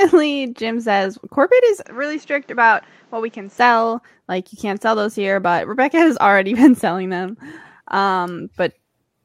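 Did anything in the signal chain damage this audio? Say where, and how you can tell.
Yes. A corrupt frame decoded at 1.04 to 1.06 s, just before "corporate is", gives a short, fairly loud blip. This is a codec fault: damaged bits in a couple of compressed frames were decoded anyway, so energy landed at wrong frequencies for those frames.

An input switched to a poorer device shows from 1.85 to 3.58 s, after "corporate is". The speech turns duller and a few dB quieter, with nothing above 8 kHz and a new noise floor well below it, all without a gap. This likely comes from a driver-level switch to a narrower-band microphone.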